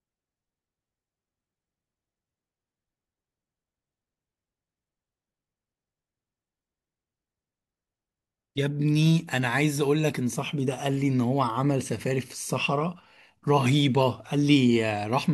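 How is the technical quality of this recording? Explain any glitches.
No audible technical faults here.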